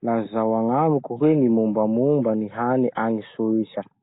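Throughout, the speech is rough, hissy and underwater-smeared, with nothing above 3.8 kHz. This is likely Nellymoser compression, filling bit-starved bands with noise, which fits a 16 kbps stream.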